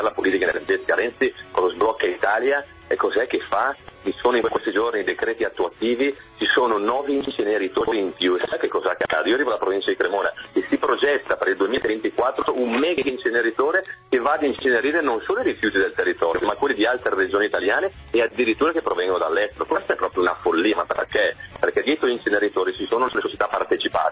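No technical faults are audible.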